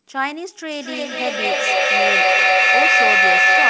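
A piercing tone of around 2 kHz rises out of the speech from 0.71 s, peaking about 11 dB above the voice until the clip ends. This is a feedback howl: two devices on one call share a room, and each microphone-to-loudspeaker trip adds gain, so the repeats build rather than fade and narrow onto the frequency the loop favours. The loop delay is roughly a fifth of a second. Nothing sounds above 8 kHz, which points to wideband G.722 coding on the call path.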